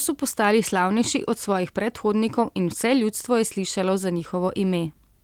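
Listening to the speech recording turned up nothing that stood out as a technical problem.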